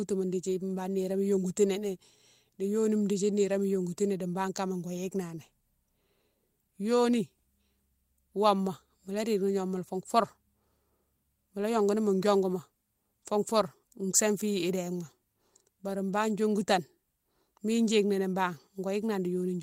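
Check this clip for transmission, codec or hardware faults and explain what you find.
No transmission, codec or hardware faults are audible anywhere in this speech clip.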